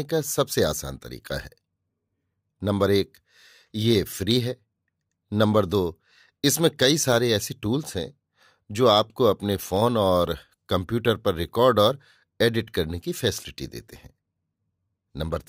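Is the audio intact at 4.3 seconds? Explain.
No. At 4.31 s the speech carries a single sharp click, a thin vertical line across the spectrum. The likely cause is dropped samples: a handful, a fraction of a millisecond, go missing, so the waveform jumps abruptly to a later value.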